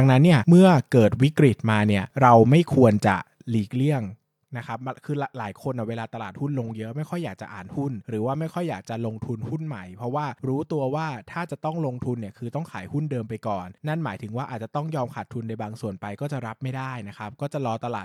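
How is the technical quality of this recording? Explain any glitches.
No technical glitches can be heard in this speech recording. Where the level rises or falls, it does so smoothly, the way a fader would move it.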